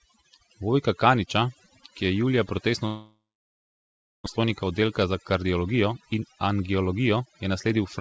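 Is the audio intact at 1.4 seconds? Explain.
No. Overdone noise removal runs throughout, so at 1.4 seconds bands near the noise estimate are pulled down with quiet speech, leaving twinkling near-silence.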